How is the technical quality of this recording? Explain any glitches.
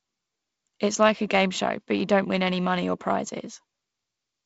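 No glitches or faults can be heard in the recording. The speech has the sound of G.722 wideband telephone coding, with nothing above about 7.7 kHz and a faint grain that fits the lower-rate 48 kbit/s mode.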